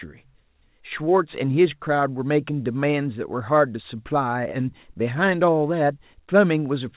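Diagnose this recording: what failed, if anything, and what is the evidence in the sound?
Nothing failed: the speech came through a WebRTC call path using G.711 A-law at 64 kbps, which is why nothing is heard above 4 kHz.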